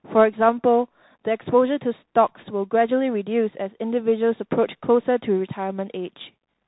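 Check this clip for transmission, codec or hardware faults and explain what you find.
The speech carries a single fault across its whole length: Bluetooth CVSD headset codec damage, and it is plainly audible. The audio is band-limited, with nothing above 4 kHz, so it sounds boxed-in and narrow. CVSD sends one bit per sample, each one only saying whether the waveform should step up or down, with a step size that adapts. Loud high-frequency content moves faster than the step can follow, so it distorts, and the s sounds come out scratchy. A granular hiss sits under the speech throughout, which fits a 64 kbit/s CVSD stream.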